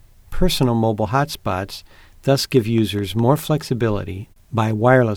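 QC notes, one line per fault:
2.36–3.40 s, train of clicks: just after "mobile hotspots", around seven near-identical ticks arrive at a steady 4.8 per second, peaking roughly level with the speech, likely interference pulses. They show as evenly spaced thin vertical broadband lines on a spectrogram and sharp spikes on the waveform.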